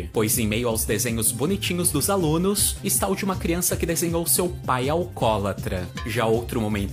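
No technical faults are audible.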